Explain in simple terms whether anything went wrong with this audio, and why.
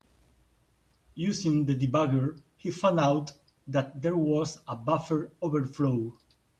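Nothing stood out as wrong when listening to this speech recording.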